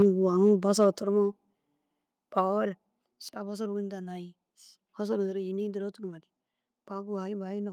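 A speech recording with harsh, crackling peaks at 0.00 to 0.06 s, 0.43 to 0.52 s and 0.80 to 0.87 s. This is likely microphone overload, with the input driven about 4, 1 and 2 dB past the converter's limit. On the waveform the tops are flattened, in the first burst across roughly a tenth of the samples, and the spectrogram shows smeared high-frequency splatter. Sudden level drops follow at 0.02 s (about 3 dB), 1.02 s (about 6 dB), 2.04 s (about 3 dB) and 3.06 s (about 4 dB). These are likely the microphone volume being stepped down by the call software's gain control, and they appear as abrupt staircase steps in the waveform envelope, with voice and background both darkening at once on the spectrogram.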